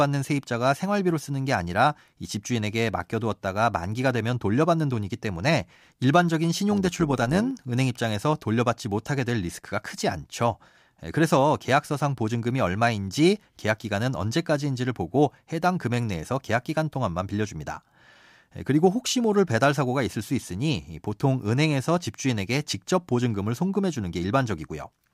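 Overlap-add ripple runs from 6.71 to 7.51 s. The speech was split into windowed frames and rejoined with an overlap whose windows fail to add up to a steady gain, so the level swells and dips with every frame. The swing is about 6 dB at a rate of roughly 100 Hz, which makes the speech sound metallic and buzzy, with extra tones around the voice for that stretch.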